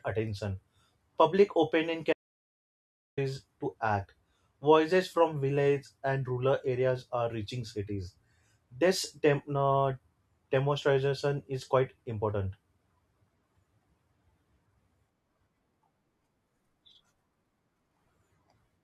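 At 2.13 s the speech cuts off mid-flow into dead, total silence with no room tone, returning abruptly at 3.17 s, so about 1.04 s is lost. This audio dropout to silence likely came from the input briefly disconnecting or muting while recording continued writing silence.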